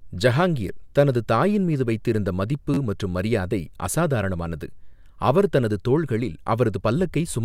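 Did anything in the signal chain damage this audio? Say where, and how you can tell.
Yes. At the driver or buffer stage, a repeated buffer sits at 2.74 to 2.78 s, between "தாயின் மீது வைத்திருந்த மதிப்பு" and "மற்றும் மரியாதை அசாதாரணமானது". One 11.6 ms block sounds three extra times with hard joins, a brief buzzy stutter. New samples arrived late, so the device replayed the last block, which fits a 512-sample buffer. Essentially no audio was lost.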